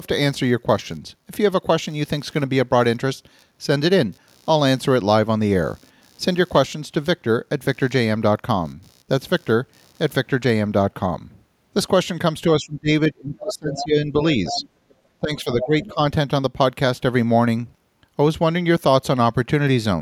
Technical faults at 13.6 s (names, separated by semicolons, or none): speech suppressed in double talk